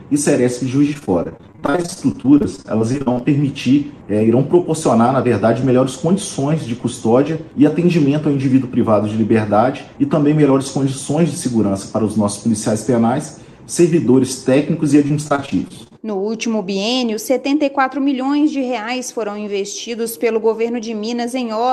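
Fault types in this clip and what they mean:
Repeated packet loss (robotic sound): packets kept going missing or arriving late, and each hole was patched by extending the previous sound. From 0.93 to 3.22 s, and again from 15.08 to 15.95 s, the audio turns choppy, with fragments dropping out.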